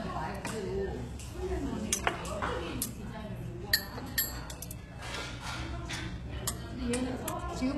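Throughout, the treble sounds bright but gritty and metallic, stopping at about 12.3 kHz, likely HE-AAC compression at a very low bitrate, near 16 kbps, rebuilding highs from copied lower bands.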